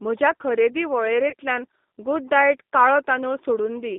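Throughout, the speech carries the G.729 codec's sound: a narrow line band from roughly 200 Hz to 3.7 kHz, with a plainly audible roughness and slightly synthetic texture, which fits an 8 kbit/s G.729A stream rebuilding each frame from a vocal tract filter, a pitch predictor and a few coded pulses. On a spectrogram, energy stops sharply near 3.7 kHz with nothing above, and the low band thins out below about 200 Hz.

Just after "म्हज्या खरेदी", from 1.30 to 1.34 s, there is VoIP packet loss concealed by the speech codec. About 30 ms of audio went missing, which points to a single lost packet. The decoder filled the gap by extending its last pitch and filter state at falling gain, so the sound turns briefly into a buzzy tone or coloured noise that fades. In the waveform, the periodic cycles repeat too regularly as the amplitude sags. On the spectrogram, the harmonics run flat and blurred before the normal texture resumes.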